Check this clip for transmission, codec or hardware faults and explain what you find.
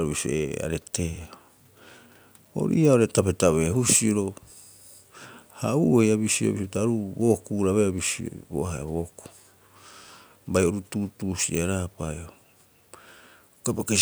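Nothing wrong turned up in this speech recording.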